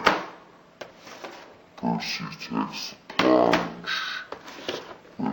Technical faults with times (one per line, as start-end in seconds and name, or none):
0.00-5.32 stereo read as mono